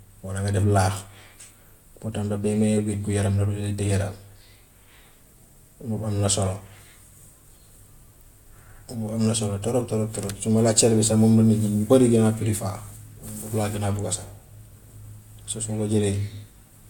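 Nothing in this speech recording stands out as a technical fault; it just runs along without anything going wrong.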